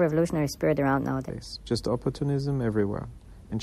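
Speech whose opening stretch, from 0.0 to 1.3 s, has a section at the wrong speed: it runs at 1.29 times normal speed, so the voice sounds hurried and about four semitones high before snapping back. On a spectrogram the harmonics and formants sit visibly higher there, with syllables compressed in time. The likely cause is playback against a mismatched clock.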